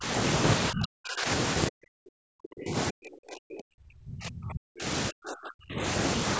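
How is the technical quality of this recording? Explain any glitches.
The speech repeatedly drops away, in four stretches: 0 to 0.05 s, 0.7 to 1.27 s, 1.69 to 4.86 s, and 5.08 to 5.82 s. This is speech suppressed in double talk. The first dip is brief and shallow. The later ones are deep, close to silence. The long middle stretch loses most of three seconds. The likely cause is an echo canceller that heard the far side at the same time and turned the near talker down with the echo. The call's microphone processing itself is working, with nothing above 8 kHz.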